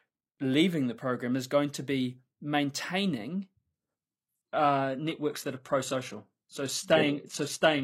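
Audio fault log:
3.74 s to end, adaptive stream at a lower bitrate: at 3.74 s the speech switches abruptly, with no gap, to a much thinner version, and nothing above 12.3 kHz survives. The player has dropped to a lower-bitrate rendition, likely because the connection slowed, and the sound points to a step from AAC-LC at around 96 kbit/s to HE-AAC near 16 kbit/s. The leaner encoding discards the top band and leaves more audible codec artefacts until the end.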